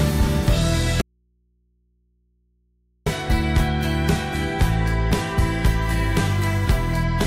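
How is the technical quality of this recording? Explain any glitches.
Two faults degrade the recording: a long dropout near the start and a phone-interference buzz near the end.

From 1.01 to 3.06 s there is an audio dropout to a faint residue. The signal cuts out abruptly for about 2.05 s and returns just as abruptly. What fills the gap is mains hum, roughly 45 dB below the normal signal level. The likely cause is a break in the source feed while the downstream input stayed live and open, so it picked up hum instead of going silent. The hard edges at both ends rule out a pause or a fade.

From 5.82 to 7.04 s a GSM phone buzz sits under the audio at about 28 dB below the signal. A nearby 2G handset on a call transmits radio bursts about 217 times a second, and the audio circuitry rectifies those pulses into the signal path. The result is a raspy, harmonically dense buzz at 217 Hz, unrelated to the program material. 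It stays nearly steady, as expected from a phone in an active call.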